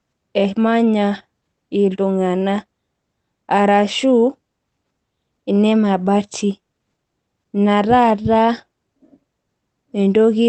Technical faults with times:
none

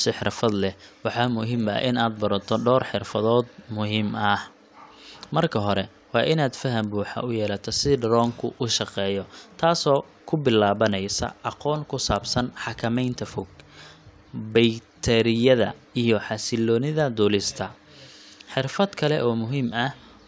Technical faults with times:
0.00-20.27 resampler restarted on every block

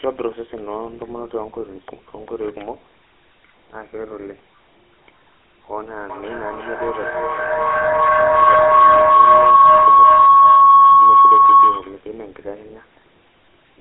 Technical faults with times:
0.00-13.81 GSM full-rate codec
6.09-12.08 feedback howl

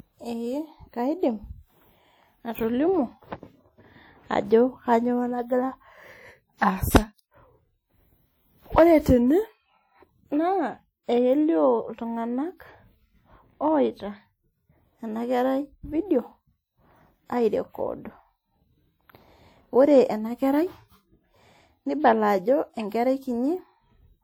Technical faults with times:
0.00-24.24 WMA compression

